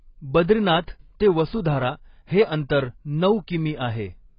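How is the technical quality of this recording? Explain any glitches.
The recording's quality is poor, with heavy lossy-coding damage across the whole speech clip. AAC compression, throughout: nothing is heard above 5.2 kHz, which points to AAC-LC at a low bitrate, likely around 16 kbps. The coder discards the upper band and coarsely quantises what remains, so speech sounds dull and muffled, with a warbly, fizzy texture on sustained sounds and sibilants.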